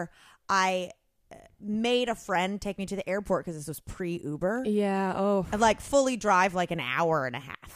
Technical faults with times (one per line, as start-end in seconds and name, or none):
none